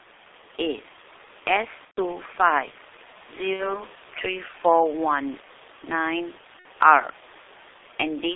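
From the start, the speech carries G.723.1 codec damage: the band stops near 3.6 kHz and starts around 300 Hz, so it sounds muffled and hoarse, with smeared consonants. The slow, low-rate coding fits roughly 6 kbit/s. A spectrogram shows an empty region above 3.6 kHz and blurred fricatives. The room noise sits about 21 dB under the voice.

VoIP packet loss concealed by the speech codec hits at 1.85–2.01 s, 3.53–3.84 s and 6.59–6.67 s. There, the decoder stretched the last sound into a fading buzzy tone or coloured noise. The first gap, about 120 ms of lost audio, fits four 30 ms frames. The waveform shows a smooth decaying stretch. The spectrogram shows a frozen stretch, with weak speech just afterwards.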